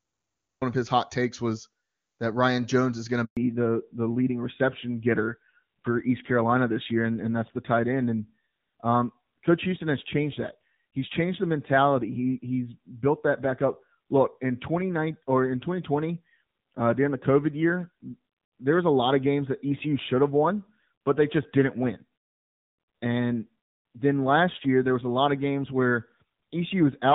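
Speech carried over a mobile call, beginning as clean HD Voice that points to AMR wideband at around 23.85 kbit/s. It has three faults. A cut-off start leaves digital silence until 0.62 s, when the sound jumps in mid-syllable just before "of his hot takes". There is no attack or fade, which is what separates it from a quiet lead-in. A handover gap follows "is going to": the sound dies away and is silent for 120 ms, from 3.25 to 3.37 s, while the call switches networks. Unlike scattered packet loss, it is one clean hole directly tied to the change that follows. From 3.37 s to the end there is a fallback to narrowband. Everything above 4 kHz disappears and the sound turns dull and gritty, which points to AMR narrowband at around 7.4 kbit/s. This is not a simple low-pass filter: the rough codec texture arrives together with the handover.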